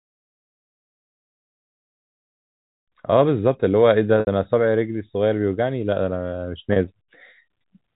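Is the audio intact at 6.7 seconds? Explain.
No. Packet loss with pitch repetition breaks the sound from 6.73 to 6.76 s, a 30 ms gap consistent with three 10 ms packets. The receiver loops the last pitch period, so it sounds like a briefly held buzz. The waveform shows identical repeating cycles, and the spectrogram shows frozen, flat harmonics.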